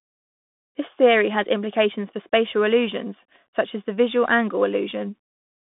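Across the whole speech clip, a Bluetooth CVSD headset codec confines the audio to roughly 150 Hz to 3.6 kHz, with nothing above 3.8 kHz. The one-bit slope tracking can't keep pace with loud high content, so sibilants turn scratchy and a granular hiss sits underneath.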